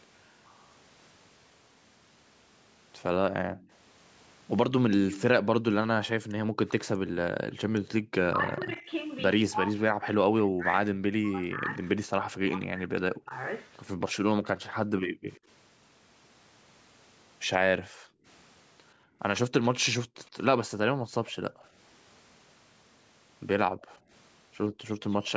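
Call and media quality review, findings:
Faint delayed repeat of the speech, 0.62–7.53 s at 121 ms and roughly 15 dB down, then 15.33–25.3 s at 106 ms and roughly 25 dB down. Echo leak: likely far-end loudspeaker pickup the echo canceller failed to subtract, returned to the line.

Room background dipping out, as deep as about 40 dB, within 3.42–7.12 s (under a second in total) and 14.82–24.1 s (about a second and a half in total). Background gated by the echo canceller: microphone pulled down hard while loudspeaker active, released afterwards.

Talker's speech ducking and breaking up, roughly 40 dB at worst, through 8.27–13.33 s and affecting around four seconds of it. Speech suppressed in double talk: likely the echo canceller unable to separate near talker from loudspeaker echo, attenuating both.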